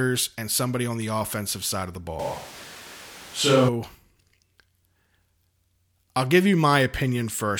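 Speech, with a switch to a distant microphone from 2.20 to 3.68 s. The voice abruptly turns hollow and roomy, with less bass and room noise about 20 dB down. The level barely changes. The close microphone likely dropped out.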